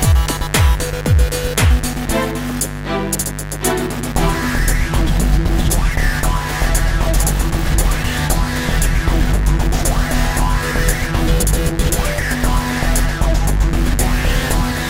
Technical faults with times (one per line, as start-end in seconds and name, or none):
0.00-14.90 mains buzz